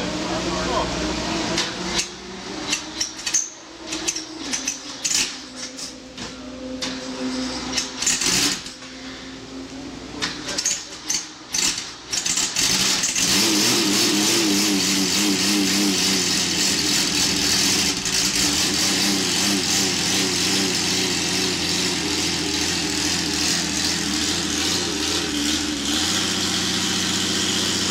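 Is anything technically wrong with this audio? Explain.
No, the recording shows no technical faults anywhere in its signal.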